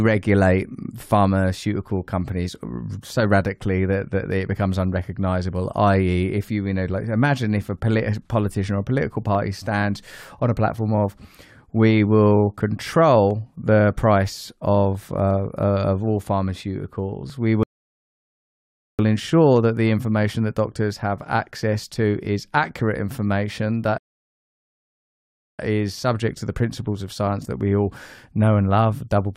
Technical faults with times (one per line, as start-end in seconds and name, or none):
9.35-17.30 periodic USB or driver dropouts
17.63-18.99 rebuffering stall
23.98-25.59 rebuffering stall